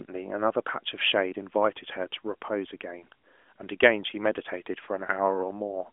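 Nothing is technically wrong with this speech clip; it carries the narrow, phone-like band of a mobile call, topping out around 3.7 kHz.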